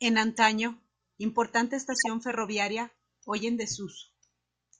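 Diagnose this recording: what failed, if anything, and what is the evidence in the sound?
The codec stage failed: corrupt frames were decoded and played. A faint blip, around -40 dBFS, sits at 0.36 s, fitting one damaged frame. A loud burst near -10 dBFS runs from 1.92 to 2.07 s, suggesting about five frames. Flipped bits gave wrong gains and codes, spraying energy at false frequencies.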